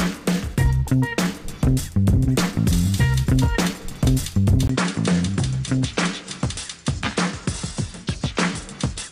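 At 4.67 s a brief gap of about 20 ms breaks the sound, after which it turns duller and somewhat quieter through to the end, with nothing above 10.5 kHz and a faint new background noise. This likely marks the input switched to a poorer device.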